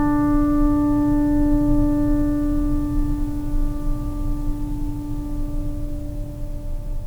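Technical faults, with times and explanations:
Nothing in the music stood out as a technical problem on listening.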